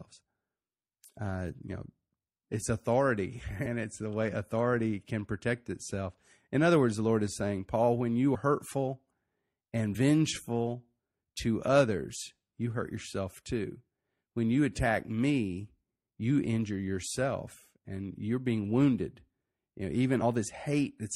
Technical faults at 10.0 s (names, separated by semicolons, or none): compressed frames skipped